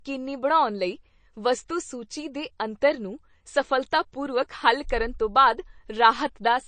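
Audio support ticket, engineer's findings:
Watery, swirly texture on speech for the whole clip, s sounds chirpy and metallic, nothing above 9 kHz. Likely MP3 compression at a low bitrate, around 32 kbps: weak frequency lines dropping in and out frame to frame. A plain low-pass would be dull but steady, not swirling.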